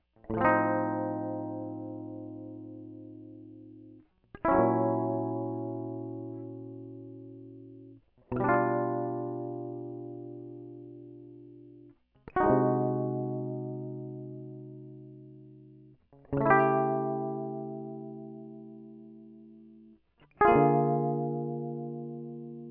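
No technical faults can be heard anywhere in this music recording.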